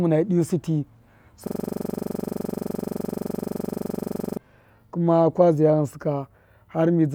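From 1.47 to 4.37 s a system hang loop freezes the speech: one 42.67 ms slice, which fits a 2048-sample buffer, repeats some 68 times at 23.4 Hz, a machine-gun stutter until "kuma ka". The waveform shows identical tiled blocks, and the spectrogram shows vertical stripes with harmonics spaced at 23.4 Hz.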